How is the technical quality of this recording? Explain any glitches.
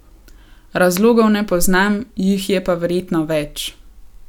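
Nothing stood out as a technical problem when listening to this speech recording, so there are no glitches to explain.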